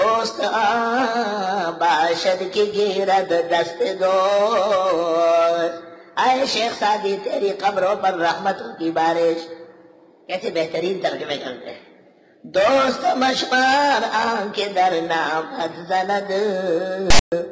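Right at the end, from 17.10 to 17.32 s, there's a short hard-edged burst of static: file tags played as audio. The text part of the tag block is being read as samples, so you get a loud rasp pushed to one side, and the zero padding drops to dead silence.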